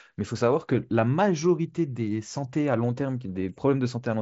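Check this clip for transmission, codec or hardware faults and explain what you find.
No faults found: the speech comes over a wideband Bluetooth mSBC headset link, with content stopping near 7.7 kHz, which is that path's normal ceiling.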